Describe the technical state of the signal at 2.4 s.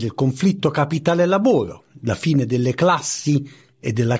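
At 2.4 s the signal is intact, with no audible fault at that point.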